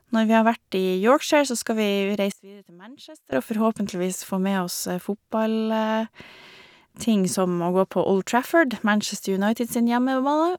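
From 2.32 to 3.32 s the speech drops by about 21 dB to a faint copy, recovering just before "og forhåpentligvis få med". The likely cause is one channel inverted: with one side's polarity flipped, the centred voice cancels when the channels are summed to mono, leaving only their small differences. On the waveform the envelope collapses for that second; a spectrogram shows energy across the band almost gone, with a faint residue remaining.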